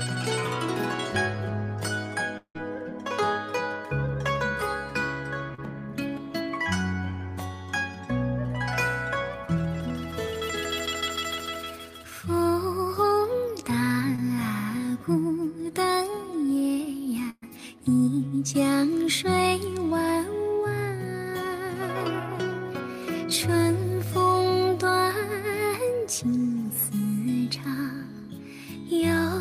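The audio has four gaps where sound was lost and patched over. Around 2.37 to 2.57 s the last sound is drawn out and fades into about 90 ms of silence before the audio resumes with roughly 180 ms missing, most likely a long network dropout; a spectrogram shows smeared, decaying bands and then an empty column. At 5.55 to 5.60 s and 14.16 to 14.20 s, short concealed packet loss fills holes of 32 ms and 19 ms with a continuation of the preceding sound, heard as a brief smear and seen as a short blurred patch. At 17.30 to 17.44 s a burst of packet loss is bridged by a fading continuation and about 40 ms of silence, with 120 ms of audio missing; the waveform dips to a flat stretch before the audio picks up again further on.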